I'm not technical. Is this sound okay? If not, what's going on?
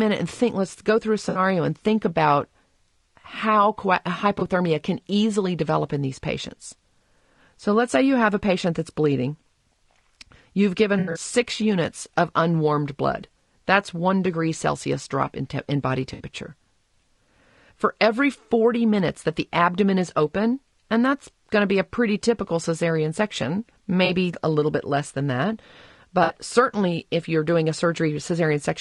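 No, not quite. The whole clip sounds rough and grainy, which is likely low-delay AAC compression, the kind video calls use, squeezing the voice too hard.

On top of that there's AAC frame loss with concealment: bits of audio went missing and the decoder patched the gaps with smeared guesses, heard as brief blurry hiccups. They fall at 1.29–1.39 s, 4.39–4.42 s just before "can easily develop in", 10.99–11.21 s just before "units of unwarmed blood", 16.13–16.22 s, 24.05–24.10 s between "pretty typical cesarean section" and "a little bit less", and 26.23–26.32 s.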